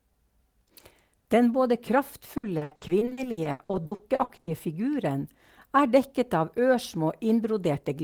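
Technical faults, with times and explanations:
2.37–4.49 s, repeated packet loss (robotic sound): frequent dropouts up to 80 ms are patched by extending prior audio, concealing 43% of the span, giving choppy speech with pieces missing.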